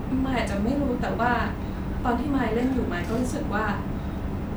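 Nothing goes wrong anywhere in this bit of speech, so there's no fault to point to at any moment.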